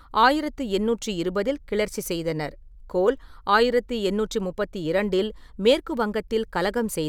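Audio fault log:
No faults detected.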